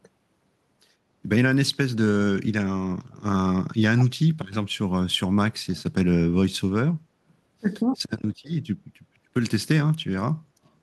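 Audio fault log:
3.16–3.23 s, 5.72–5.83 s, 7.28–7.34 s, 10.64–10.70 s: echo leak, brief faint copies of the speech trailing by 124 ms, about 25–40 dB down, likely loudspeaker pickup the far-end echo canceller missed.
8.75–8.83 s: speech suppressed in double talk, the speech briefly drops by roughly 35 dB for about 70 ms, likely an echo canceller muting overlapping talk.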